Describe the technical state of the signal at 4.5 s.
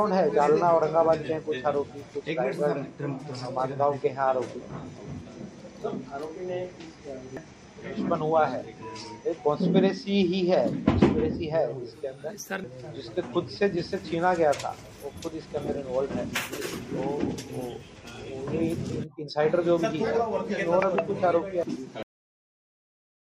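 At 4.5 s the signal is intact, with no audible technical fault at that moment.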